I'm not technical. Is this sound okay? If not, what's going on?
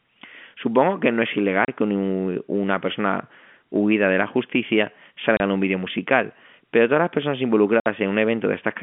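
No. The speech drops out three times from packet loss filled with silence: small chunks of audio never arrived, and the receiver played nothing in their place. The gaps are at 1.65 to 1.68 s, after "que no es"; 5.37 to 5.40 s, after "huida de la justicia"; and 7.80 to 7.86 s, after "pero todas las personas". The first two last 30 ms each and the last 60 ms, which fits one and two lost packets. Each gap starts and stops abruptly. The narrow telephone sound comes from ordinary phone-line coding.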